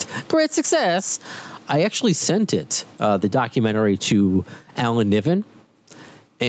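All the way through this speech you can hear gain pumping: the level swings by roughly 15 dB as the gain is pulled down on loud sounds. It's likely a fast limiter clamping down on gain set far too hot, which squashes the level range. The top end stops around 8 kHz, as the call path would have it.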